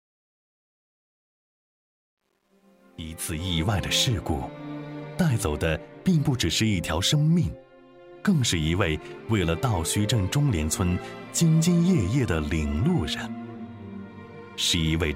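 Right from the start, the fade-in over the first 3.6 s has truncation distortion. The gain stage drops bits without dither, which fits a 10-bit word length, so the quiet opening up to about 2.67 s turns gritty before the fade cleans up.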